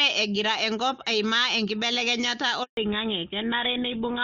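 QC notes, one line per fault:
2.63–2.77 s, handover gap: The sound dies away and goes silent for 140 ms. The call switched networks, and no frames arrived until the new link started.
2.77 s to end, fallback to narrowband: Everything above 4 kHz disappears, leaving a duller, rougher sound. The clear wideband sound before the switch fits AMR-WB at 23.85 kbit/s, and the narrowband sound after it fits GSM full rate at 13 kbit/s.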